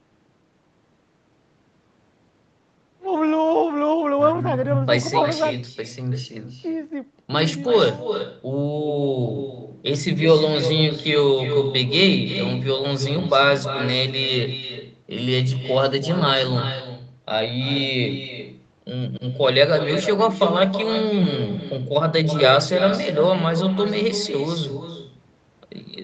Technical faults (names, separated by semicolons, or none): echo with no canceller